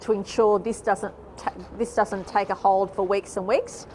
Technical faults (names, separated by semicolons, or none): none